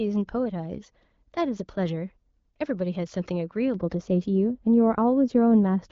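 From 3.74 s to the end, wrongly applied de-emphasis slopes the treble down, about 11 dB by 10 kHz, muffling the speech; spectrograms show upper bands fading smoothly.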